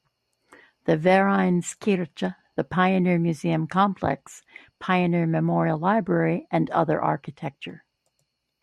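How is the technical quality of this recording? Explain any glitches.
Two brief codec glitches break into the speech. Corrupt frame decoded, at 1.36 to 1.39 s and again at 4.11 s: damaged bits in compressed frames were decoded anyway, misplacing energy across the spectrum. The first spans a couple of frames and is the louder of the two, peaking around -20 dBFS; the second is a fainter single-frame glitch, around -30 dBFS.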